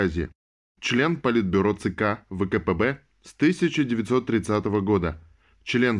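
No technical faults are audible anywhere in the recording.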